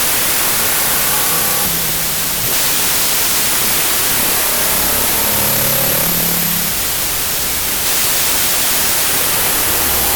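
Wrong sample width runs through the whole of this music clip, from start to finish. The audio sounds like samples stored four bytes wide but read back three bytes at a time, which fits 32-bit data decoded as packed 24-bit. Many decoded values mix bytes from neighbouring samples, so loud noise dominates, with the music buried and running at 0.75 times its proper speed with lowered pitch.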